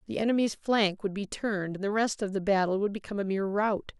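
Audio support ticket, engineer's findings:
Faint regular ticks on the speech, 0.10 to 3.77 s, roughly every 0.3 s, about 15 in all. Clock slip clicks, likely two devices free-running on separate clocks, drift of around 70 ppm, each tick fitting a single dropped or repeated sample.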